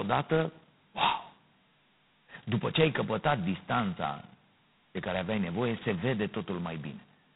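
Right from the start and all the way through, the speech has that harsh, rasping hiss riding on its level that says G.726 ADPCM at its lowest rate, which fits 16 kbit/s: too few bits per difference sample. Nothing gets through above about 3.9 kHz, either.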